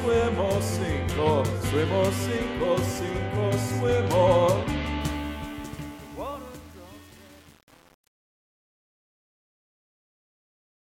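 Truncation distortion on a fade, 5.01 to 10.88 s: the fade-out is quantised without dither, consistent with roughly 7-bit resolution, so it grows gritty.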